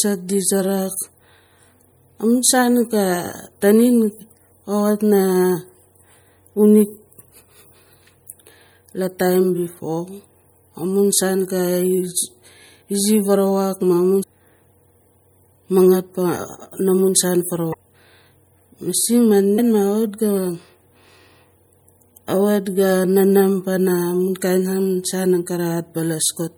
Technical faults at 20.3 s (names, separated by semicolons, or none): MP3 compression